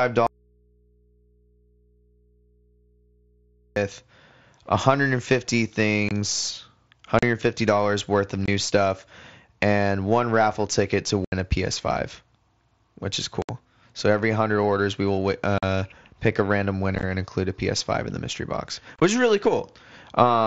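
From 0.27 to 3.76 s there's an audio dropout to a faint residue. The speech cuts out abruptly for about 3.5 s and only mains hum remains, about 40 dB down. That's likely an input that went open while the path stayed live.

Then comes unconcealed Bluetooth headset packet loss over the wideband mSBC link, with hard-edged holes at 6.09, 7.19, 8.46 (between "worth of" and "stuff and one raffle"), 11.25, 13.42 (after "which is"), 15.58, 16.95 (after "pick a random") and 18.96 s. Each gap runs 22 to 75 ms. The ones at 16.95 and 18.96 s are scattered short losses that sound choppy rather than like a single clean hole.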